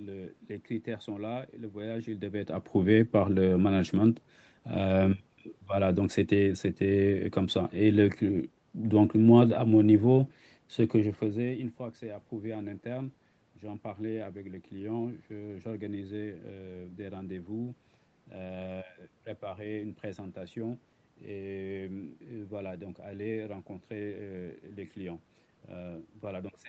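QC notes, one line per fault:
Nothing stood out on listening.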